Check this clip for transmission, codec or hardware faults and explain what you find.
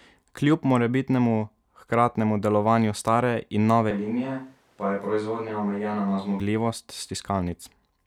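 One fault is audible in the speech. Switch to a distant microphone, 3.91 to 6.40 s: the close microphone's signal likely dropped out, leaving only a pickup further from the source. The sound abruptly turns roomy and hollow, with thinner bass, a level about 5 dB lower and room noise rising to roughly 35 dB below the speech, then snaps back to the close sound.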